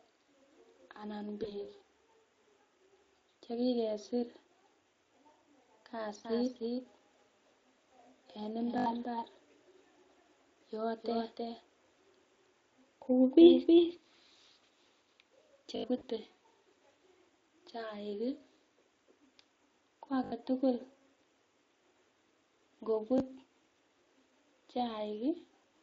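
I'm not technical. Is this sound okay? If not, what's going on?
No. There are three kinds of problem in this speech recording.

Around 1.43 to 1.65 s and again at 15.97 to 16.04 s, the voice briefly turns into a stretched, buzzy or noisy sound that fades. This is VoIP packet loss concealed by the speech codec: bits of the call went missing, and the software guessed to fill the gaps.

From 6.25 to 13.97 s, everything is heard twice, with a slightly quieter copy about a third of a second behind. This is a doubled audio track, likely from the same sound being recorded a second time through a slower route.

At 8.78, 15.76 and 20.24 s, a tiny piece stutters several times in a row, and at 23.18 s a tiny piece plays one extra time. This is a repeated buffer: new sound arrived late, so the same 20 ms piece was replayed.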